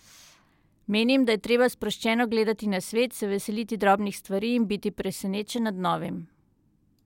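No dropouts, distortion or other technical faults can be heard anywhere in this speech recording.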